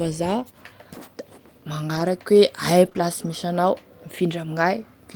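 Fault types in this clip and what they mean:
Lost packet rebuilt from error correction: Packets of the call went missing, but the packet that followed each loss carried a low-bitrate backup copy, and the decoder played that instead. There is no gap, just briefly rougher, noisier speech: about 40 ms at 1.95 to 2.01 s, which fits two consecutive 20 ms packets, then single 20 ms patches at 2.85 to 2.87 s and 2.97 to 2.99 s.
Short concealed packet loss: Two back-to-back 20 ms stretches of the speech arrived too late for the decoder, with no backup copy available, so the receiver invented replacement audio by extending what it had just played and then blended back into the real signal. Between 2.89 and 2.97 s this is heard as a quick smear or wobble, sitting right between the two single rebuilt patches.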